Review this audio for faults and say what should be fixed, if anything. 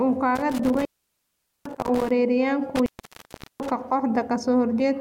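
Intermittent contact at 0.35 to 2.11 s and 2.75 to 3.71 s: a loose cable or plug breaks the signal path, cutting the speech for about 0.80 s and 0.74 s, with crackle at each edge and faint hiss during the gaps. Reseat or replace the suspect cable and connectors, and secure them with strain relief before recording.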